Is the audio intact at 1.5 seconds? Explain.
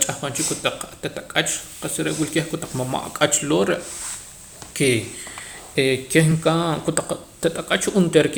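Yes, the audio is intact at 1.5 seconds, with no fault audible at that point in the speech.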